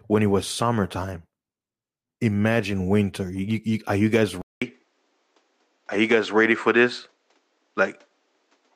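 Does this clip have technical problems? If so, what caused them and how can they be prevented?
Yes. The input likely switched to a poorer device at 4.42 s, leaving a 0.2 s silence, then duller speech with nothing above 8.3 kHz and fresh background noise. Prevent it by locking the recording input to one fixed microphone.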